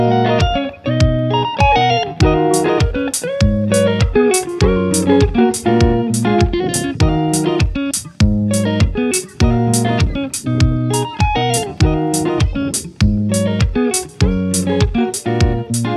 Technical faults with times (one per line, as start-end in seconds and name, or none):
none